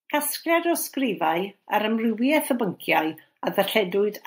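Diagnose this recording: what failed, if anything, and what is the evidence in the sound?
Automatic gain rising, from 0.43 s to 2.54 s, at the call-processing stage. Over those two seconds the level of the speech and the background noise climbs together by about 4 dB, a slow swell rather than a step. That joint rise is the evidence: the automatic gain control judged the input too quiet and raised its gain gradually, and because it scales the whole signal, the noise floor comes up along with the voice.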